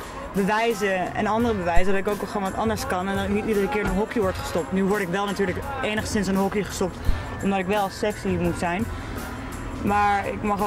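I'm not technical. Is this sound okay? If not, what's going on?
No, there are two deep thumps, one at 1.77 to 2.13 s and a shorter one at 7.09 to 7.18 s. That's a phantom power thump, from the mic's power switching on or off live.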